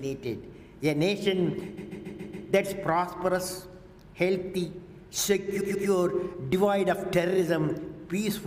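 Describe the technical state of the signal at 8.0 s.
At 8.0 s the audio is intact, with no audible fault at that point.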